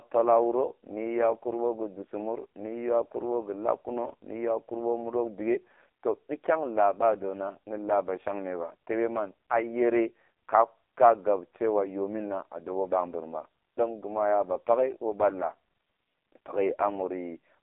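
The speech has been squeezed through an AMR narrowband mobile codec for the full length of the clip, running at a very low rate that fits the 5.15 kbps mode. Only a telephone band of roughly 300 Hz to 3.5 kHz survives, with nothing above 3.6 kHz. Because so few pulses drive the vocal-tract model in each frame, the voice comes out heavily buzzy and synthetic, thin and boxy, with its consonants dulled.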